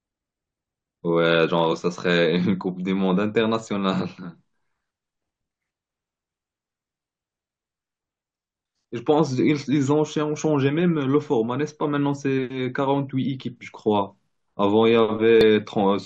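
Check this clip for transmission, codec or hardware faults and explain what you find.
There's one kind of fault here, and it shows up twice: damaged data in the compressed stream, at about 1.72 s and again at 15.41 s. Each is a very short blip in the speech, well under 20 ms. What's happening is that a bit of the encoded data got corrupted, so the decoder misreads those frames, loses its place, and has to hunt for the next valid frame header. That brief stumble comes out as a quick chirp, squawk, click or short hole.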